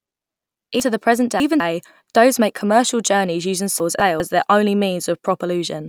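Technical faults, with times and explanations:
0.8–1.6 s, chunks out of order: a jumbled stretch before "dhows make commercial journeys", as one 200 ms chunk plays three chunks late, leaving hard joins.
3.8–4.2 s, chunks out of order: a brief scrambled moment between "make commercial journeys using" and "their only", where a 200 ms chunk arrives one chunk late.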